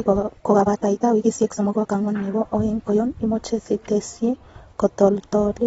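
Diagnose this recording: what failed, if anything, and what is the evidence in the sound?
The codec stage is the likely culprit for the whole clip. The damage is plainly audible: there's nothing above 7.7 kHz, and the speech has that dull, smeared AAC compression texture. The lowered cut-off and coarse quantisation fit a low-bitrate AAC-LC encode, around 24 kbps.

From 0.0 to 3.34 s there's a time-stretched section. The speech runs about 1.66 times fast but keeps its pitch, so it sounds rushed, then the pace drops abruptly at 3.34 s. That's likely editing software squeezing audio to fit a length by dropping short pieces.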